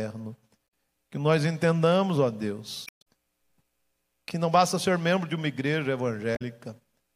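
A speech recording with damaged data in a compressed stream at 0.64–0.67 s, 2.84–3.07 s and 6.32–6.42 s. Corrupted bytes make the decoder misread frames and hunt for sync, giving brief chirps, squawks, clicks or short holes.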